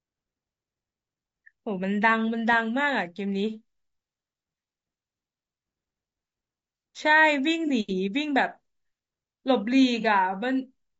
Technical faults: low-delay AAC compression; AAC frame loss with concealment

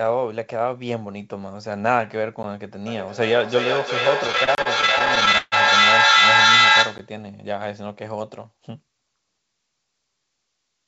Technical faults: block of digital silence; feedback echo between two devices; repeated stalls (stutter)

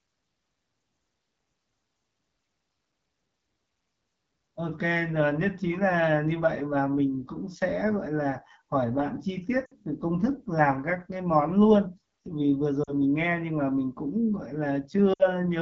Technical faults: AMR wideband (HD Voice) codec; lost AMR speech frames

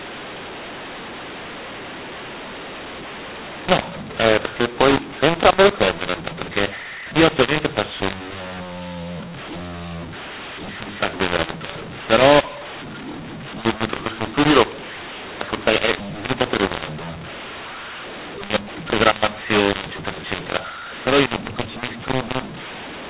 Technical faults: mu-law and A-law mixed up

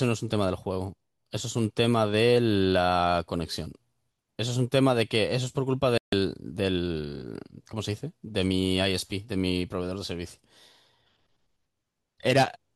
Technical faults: digital broadcast dropout

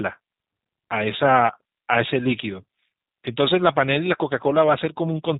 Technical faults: G.729 codec

